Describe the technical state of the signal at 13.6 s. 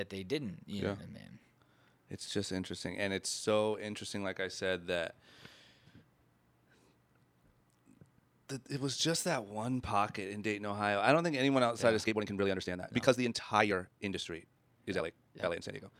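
At 13.6 s the speech sits inside a time-stretched section running from 11.98 s, just after "anyone outside yeah of", to the end, played about 1.77 times faster at unchanged pitch, likely by dropping short slices. It sounds rushed. The spectrogram shows compressed syllables with normal harmonic spacing.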